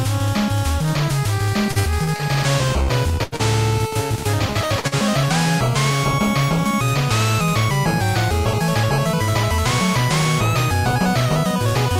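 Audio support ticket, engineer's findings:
Repeated packet loss (robotic sound), 1.71–2.22 s: jitter buffer or network path dropping packets four times in half a second, gaps up to 45 ms. Decoder keeps extending the last sound, so about a third of the stretch is synthetic. Choppy texture, fragments missing.

Short concealed packet loss at 2.83, 3.36, 3.87, 4.80 and 4.87 s: roughly 40 ms lost each time. Concealment continues the prior signal, then crossfades back. Each one is a brief smear or wobble.

Burst of packet loss, 3.23–3.35 s: consecutive packets late or lost, about 80 ms missing. Decoder extrapolates the last sound while attenuating it, producing a held buzz or fading hiss, then resumes further on with that section absent.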